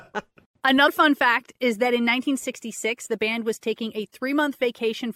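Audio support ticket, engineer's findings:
Speech, 0.87 s: brief glitch lasting about 18 ms. Likely component: compressed stream or file upstream of the decoder. Mechanism: damaged data in the compressed stream. Corrupted bytes mean the decoder misreads the frame there, loses sync and hunts for the next frame header. Differs from a buffer underrun or packet dropout, which leaves a gap of silence or a plain click.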